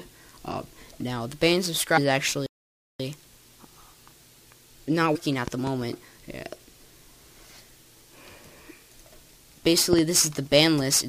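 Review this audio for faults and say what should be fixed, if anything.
Compressed frames skipped at 1.96–1.98 s and 5.14–5.16 s. At each point the sound jumps forward, by roughly 150 ms at the first and roughly 200 ms at the second. Both jumps are about seven of the 23.2 ms frames, which points to whole frames lost from the file or rejected by the decoder. No silence is inserted at either join. That separates it from a stall. To prevent it, repair or re-encode the file from an intact source and check its integrity after transfer.

A playback stall runs from 2.46 to 3.00 s. The sound cuts out in mid-flow for about 533 ms and then resumes. The likely cause is the player running out of buffered data or its thread being blocked. Unlike the frame skips, there is an audible gap of silence. To prevent it, use a larger playback buffer and keep the audio thread at high priority, free of blocking work.

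Loud pops occur at 5.48–5.69 s and 9.93–10.01 s, each a pair of sharp pops. They peak about 10 dB above the surrounding sound at the first and about 15 dB above it at the second. The sound carries on underneath, so nothing is lost or interrupted, which sets them apart from skips and stalls. A voltage spike from a connector, switch, static or driver glitch is likely. To prevent them, secure cables and grounding and update the audio driver before recording.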